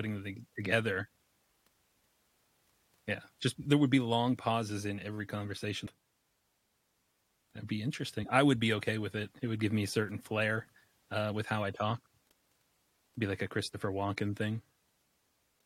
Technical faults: damaged data in a compressed stream

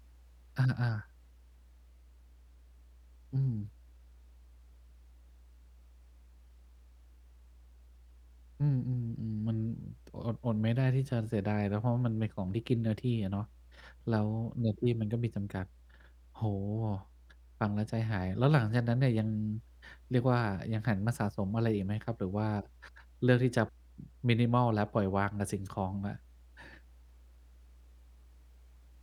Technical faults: mains hum

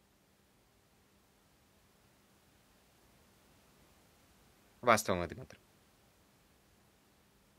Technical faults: none

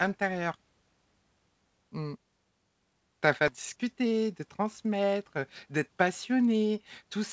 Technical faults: skip ahead; jitter buffer speed-up

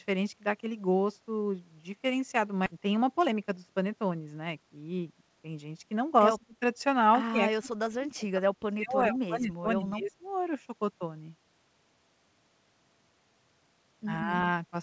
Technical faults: skip ahead; jitter buffer speed-up; speech suppressed in double talk

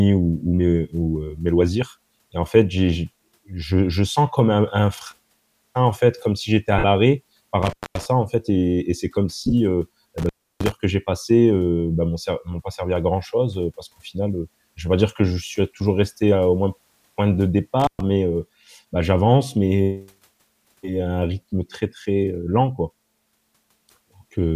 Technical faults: lost LE Audio frames; intermittent contact

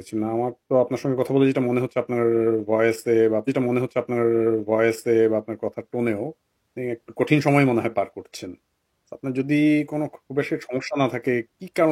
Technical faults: stream segment repeated

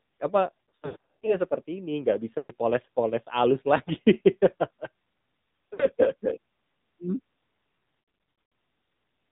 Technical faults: AMR narrowband mobile codec; lost AMR speech frames

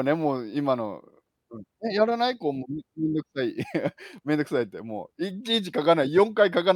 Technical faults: none

